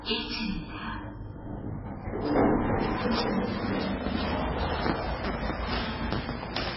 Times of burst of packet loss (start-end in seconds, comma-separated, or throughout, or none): none